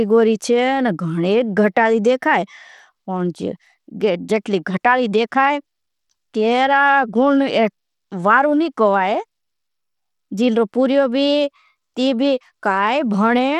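From start to finish the speech carries plainly audible coding damage, likely from Bluetooth SBC compression at a low bit pool, which fits a rate near 96 kbps. Too few bits reach the upper sub-bands, so the treble thins and flickers while a gritty grain and aliasing sit on the sound. A spectrogram would show the top bands breaking into patchy, blinking blocks rather than smooth energy, with mirrored traces, while the waveform looks largely ordinary.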